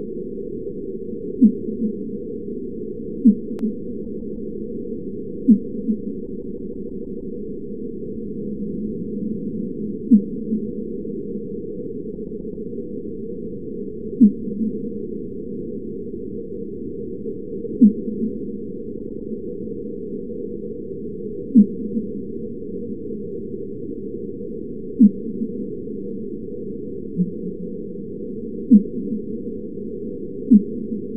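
Four stutters loop short blocks of sound. From 4.04 to 4.51 s a 157 ms block plays three extra times. From 6.26 to 7.36 s a 157 ms block plays seven extra times. From 12.14 to 12.66 s a 131 ms block plays four extra times, and from 18.98 to 19.29 s a 105 ms block plays three extra times. These are repeated frames: runs of compressed frames decoded again, which lengthens the audio by about 2.4 s in all.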